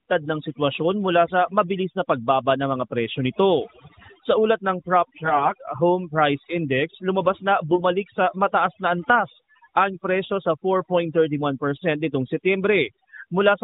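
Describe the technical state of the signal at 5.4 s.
At 5.4 s the speech turns hoarse, scratchy and gargly while keeping roughly its pitch and loudness. These are AMR bit errors, running from 5.24 to 5.52 s, just after "ulat ng". Roughly 7 percent of the less protected bits in 12 mobile-codec frames arrived flipped, yet the check on the critical bits still passed. So the excitation pulses and fine pitch, gain and spectral values decode wrongly.

Underneath, the background is reduced and broken into twinkling specks. This is overdone noise removal, present throughout. An over-aggressive denoiser pulled individual frequency bands down or out wherever they sat near its noise estimate, taking quieter parts of the speech with them.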